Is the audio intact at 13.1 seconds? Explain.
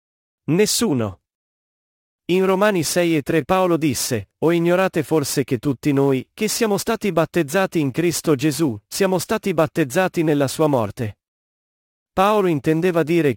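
No. At 13.1 seconds the speech is affected by sample clock jitter, which runs from 2.34 seconds to the end of the clip. The converter's clock wanders by around 10 microseconds, so each sample lands slightly early or late. Where the waveform changes fastest, that timing error matters most. The result is a hiss and roughness riding on the speech, roughly 20 dB below it. It gets stronger on loud, bright sounds and disappears in pauses.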